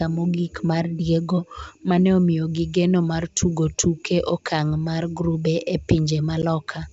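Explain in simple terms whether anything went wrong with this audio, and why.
Packet loss on an ADPCM call at 6.42 s: about 10 ms of sound, roughly one packet, drops out into a hard-edged silent gap. The receiving decoder's running predictions then briefly disagree with the sender's, so the sound resumes with a short click or roughness before settling. The G.722 wideband coding stays clear throughout.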